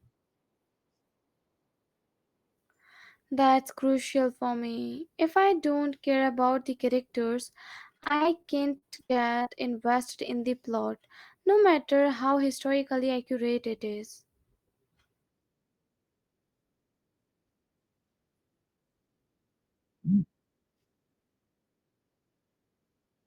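Between 7.93 and 9.47 s, just after "care about the characters" and before "invested in the", the stream suffers repeated packet loss (robotic sound). The choppiness points to roughly a dozen short dropouts, none longer than about 50 ms, each patched by stretching the preceding sound. Around 0.3 s, about a fifth of that stretch, is filled this way, so the speech turns broken and choppy, with small pieces missing.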